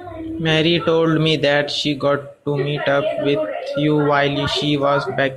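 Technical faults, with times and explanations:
No technical faults can be heard in this speech recording. There is nothing here to time or explain.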